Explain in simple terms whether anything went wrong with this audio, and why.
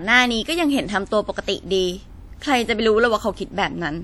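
Something did go wrong, and you can hear it from start to finish. The speech has a ringing, washy quality, with a hiss that swells and fades along with the talking. That's the signature of WMA compression, likely squeezed down fairly hard. The codec chops the sound into longish blocks and saves space by rounding off detail, so its errors smear across tens of milliseconds and weaker frequency components simply vanish.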